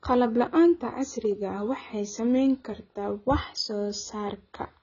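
From start to finish the speech has a lowered top end and a heavily smeared, warbling, fizzy texture, likely AAC compression at a rate that points to around 16 kbps. Unlike a plain low-pass filter, the band-limiting comes with shifting spectral holes and watery artefacts.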